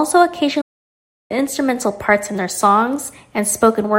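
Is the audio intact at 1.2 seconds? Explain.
No. At 1.2 s the speech is inside a playback stall running from 0.61 s to 1.31 s. The output drops to silence for about 0.69 s mid-flow, then resumes, likely because the player ran out of buffered data or its thread was blocked.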